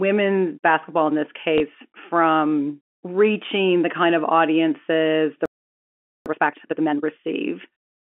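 At 1.58 to 1.60 s, just after "basketball in this" and before "from reaching the kind", there is packet loss with the last packet repeated. One packet went missing, and the receiver filled the 20 ms gap by playing the previous 20 ms of audio again, which fits 20 ms packets. Since only a single packet is replayed, it comes across as a small blip rather than a stutter. On a spectrogram, a 20 ms slice duplicates the pattern directly before it, and any discontinuity at the joins shows as a thin vertical line.

From 5.46 to 6.26 s, right after "kind of audiences the", the sound stops in mid-flow for about 0.8 s. This is a playback stall, likely caused by the player running out of data or its thread being blocked, so the output fell silent until it recovered. In the waveform it appears as a flat, near-silent stretch that cuts off abruptly. The spectrogram shows an empty band across all frequencies for that span.

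From 6.26 to 7.06 s, the player works off the backlog with time-compressed catch-up, running at 2× speed by cutting out small pieces and cross-fading across the gaps. The speech sounds hurried but keeps its normal pitch. On a spectrogram, the harmonic bands stay at their usual frequencies while syllables and pauses are squeezed to half their usual duration. In the waveform, the speech envelopes sit packed tightly together. Throughout the clip, G.711 telephone coding limits the band to roughly 250 Hz to 3.4 kHz.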